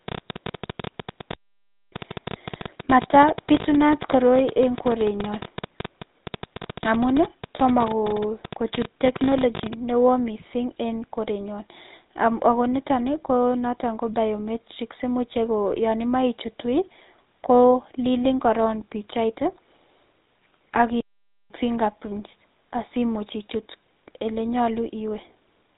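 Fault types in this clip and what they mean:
GSM full-rate codec: speech passed through the 13 kbps GSM coder, band-limited below 4 kHz, with plainly audible buzzy, gravelly roughness throughout.
Train of clicks: irregular ticking at about 12 per second, roughly a hundred clicks peaking around 10 dB above the speech, ending before "newo mising en korenyon", likely from interference.
Playback stall: the output drops to silence mid-flow twice, for 0.59 s at 1.34 s and 0.50 s at 21.01 s, likely from the player running out of data.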